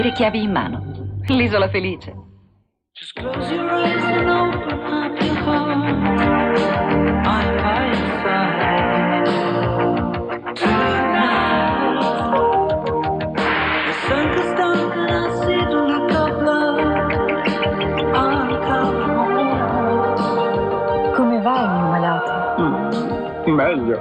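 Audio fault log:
1.28–1.36 s and 14.34–14.40 s, loud pop: each is a double pop sitting above the continuing sound, a little above it the first time and about 10 dB the second, likely from a voltage step at a plug, switch or static discharge.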